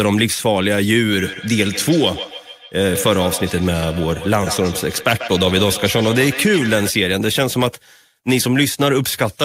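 From about 1.15 s to 6.94 s there's a feedback echo between two devices. Two endpoints seem to be on the same call in one room, so one plays back what the other's mic sent, and that mic hears it again. Each canceller only strips its own playback, so the loop survives. You hear the speech come round again roughly every 150 ms, thinner and ringier, peaking at about 11 dB below the speech itself.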